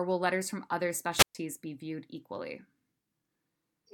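A wireless microphone squelch dropout hits this speech clip from 1.15 to 1.35 s. The analogue FM link from the radio microphone weakens, so hiss and static rise briefly before the receiver's squelch cuts the output, leaving a hole of near silence about 125 ms long. When the signal recovers, the squelch reopens and the speech comes back, having lost the stretch spoken during the gap.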